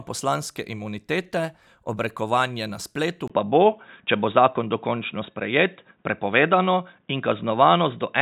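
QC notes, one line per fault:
3.28–8.21 s, input switched to a poorer device: recording likely moved to a lower-grade microphone path after "imunitete obrekovanje na spletu", leaving a 20 ms gap, then nothing above 3.8 kHz, so the sound turns dull and boxy, with a level shift of about 5 dB and faint new background noise.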